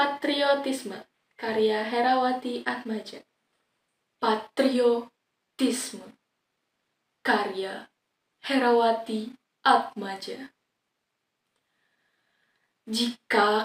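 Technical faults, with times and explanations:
No technical faults can be heard anywhere.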